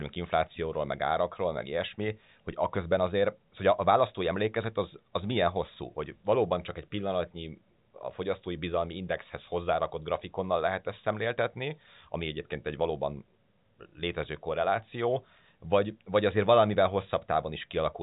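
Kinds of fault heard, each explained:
No faults heard in this speech.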